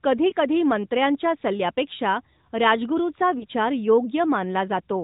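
Right near the start, around 0.30 to 0.34 s, there's a lost AMR speech frame: a short dip or warble as the decoder bridges a frame that failed its checksum by replaying the last good pitch and vocal-tract settings at lower gain. The same thing happens again at about 3.38 to 3.46 s. Each gap is brief enough to fit a single missing 20 ms frame, so the sound never stretches out or fades away.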